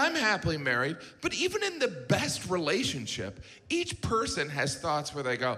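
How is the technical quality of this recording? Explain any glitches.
No technical glitches can be heard anywhere in the recording, and the signal stays intact and continuous throughout.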